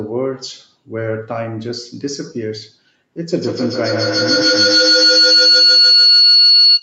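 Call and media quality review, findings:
Feedback howl, 3.23 s to end of clip. Tone around 4 kHz, rising to about 10 dB above speech. Repeats roughly every 150 ms, the loop delay. Two call devices share a room. Mic-to-speaker loop gains level each pass. Never broken.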